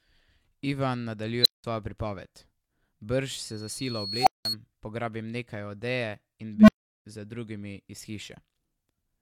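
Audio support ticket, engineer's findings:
Unstable filter, three events. 1.42–1.64 s: tone near 4 kHz swells in 38 ms, clips, then drops to 186 ms of silence. 4.20–4.45 s: around 700 Hz, 64 ms build-up, 186 ms silence. 6.55–7.05 s, after "odeje in", before "za drugimi iz": low tone near 200 Hz, 134 ms build-up, 372 ms silence. Component: recursive filter with bad coefficients. Output diverges, overflows and mutes until the state resets.

Loudspeaker feedback squeal, 3.43–4.56 s. Steady 4.3 kHz tone rises over about a second to about 5 dB above the speech. Mic picks up its own monitor/PA, and loop gain exceeds unity at 4.3 kHz. Overlaps the 700 Hz filter burst.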